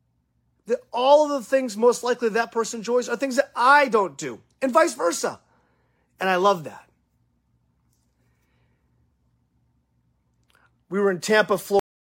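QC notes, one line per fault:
11.79 s, cut-off end. The speech stops mid-sound and drops straight to digital silence with no decay. The final buffers were never written or played.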